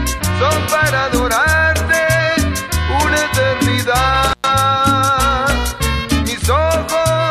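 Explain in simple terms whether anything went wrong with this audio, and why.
Something did go wrong, once. Between 4.28 and 4.49 seconds the sound briefly cuts out, with the signal gone for about a tenth of a second. This is an intermittent contact: a loose plug or cable momentarily lost its connection, so the audio crackles as it breaks and remakes, with faint hiss in between. That crackle around the gap is what separates it from a digital dropout, which leaves a clean, silent hole.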